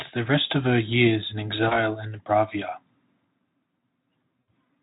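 At 1.67 s and again at 4.41 s, VoIP packet loss concealed by the speech codec: the decoder fills roughly 40 ms, then 60 ms, by extending its last pitch and filter at falling gain, giving a brief buzzy or noisy smear, consistent with two and three lost 20 ms Speex frames.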